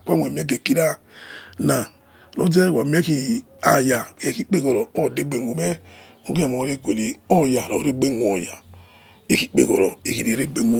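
No technical faults can be heard in the speech recording at any point.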